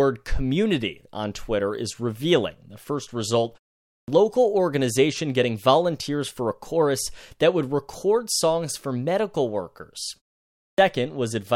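The output path powers down or loses lock during short silences and needs a moment to come back, producing a clipped start after a pause twice. At 3.83 s, after a pause of 0.33 s, about 250 ms of speech is swallowed up to 4.08 s. At 10.55 s, after 0.42 s of quiet, about 230 ms is lost up to 10.78 s. Each time the speech bursts abruptly out of silence with its opening sounds missing.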